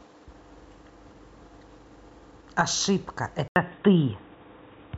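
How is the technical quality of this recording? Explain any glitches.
The recording is clean up to 3.48 s, then drops in quality for the rest of the clip. At that point the speech cuts out for about 80 ms. When it returns, it sounds dull and boxy. Nothing comes through above 3.8 kHz. A faint new background noise appears, roughly 40 dB below the speech. The loudness stays about the same. This is likely an input switched to a poorer device, such as another microphone or a headset's call mode. That device passes a narrower band and brings its own noise floor.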